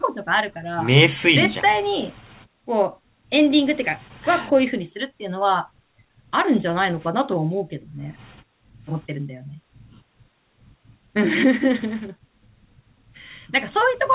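No technical faults can be heard in the speech, which arrives over a call link whose narrowband coding leaves nothing above 4 kHz, consistent with G.711 A-law.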